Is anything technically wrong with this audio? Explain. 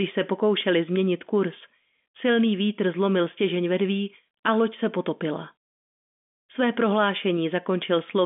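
No, nothing is technically wrong with this audio, which is telephone speech carried by G.711 coding with nothing above about 3.7 kHz.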